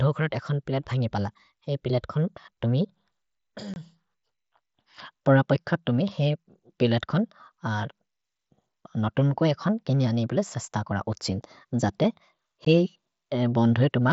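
At 3.74 to 3.76 s there's a hole of about 22 ms, and another, about 15 ms, lands at 12.65 s. Both are unconcealed Bluetooth headset packet loss: voice packets between headset and phone went missing, and nothing patched the gaps, so silence or an idle pattern fills them. The edges are abrupt. The gap lengths fit three and two lost 7.5 ms frames on the wideband mSBC link, which keeps its usual 8 kHz ceiling.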